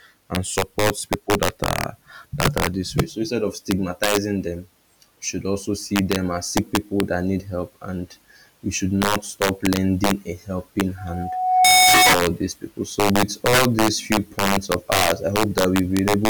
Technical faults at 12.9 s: integer overflow

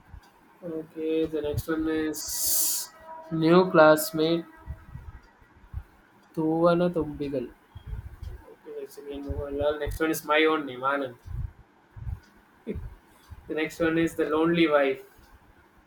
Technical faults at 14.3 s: Bluetooth stutter

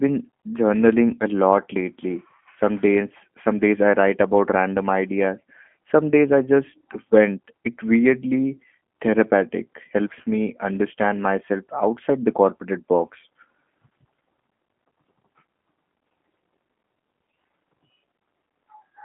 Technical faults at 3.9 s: G.729 codec

